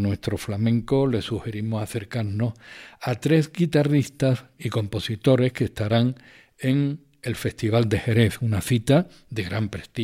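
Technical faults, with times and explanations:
No technical faults are audible.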